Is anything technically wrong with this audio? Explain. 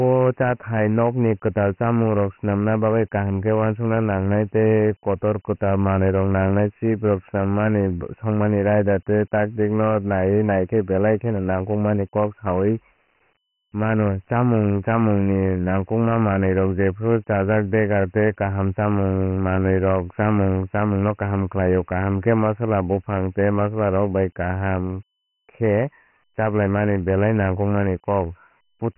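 Yes. Throughout the whole recording, the speech has been through Dialogic VOX ADPCM coding, the 4-bit adaptive scheme used for phone menus and voicemail. At 24 kbps it fits a rate of 6,000 samples a second, so nothing survives above 3.4 kHz. The coarse 4-bit steps can't track the waveform closely, and the damage here is heavy: the speech sounds muffled and thin, with a gritty, granular noise riding on it.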